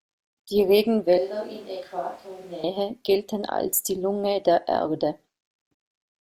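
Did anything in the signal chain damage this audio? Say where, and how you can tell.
Yes. At capture, the close microphone's feed likely dropped out and a switch to a distant microphone took over from 1.18 to 2.64 s: speech turns suddenly roomy and thin, roughly 10 dB quieter, with room noise only about 25 dB down, cutting in just before "gelten als die".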